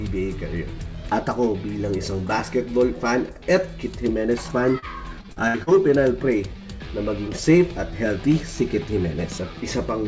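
A brief smear between 4.79 and 4.85 s is short concealed packet loss. About 30 ms of audio never arrived in time, so the receiver continued the preceding sound to fill the hole, then blended back into the real signal.

From 5.21 to 5.70 s the sound turns choppy, with fragments missing. This is repeated packet loss (robotic sound). Four separate gaps, the longest 62 ms, were each patched by extending the last sound, leaving roughly a third of that stretch synthesised. Throughout, the call path passes nothing above 8 kHz, which fits G.722 at 64 kbps.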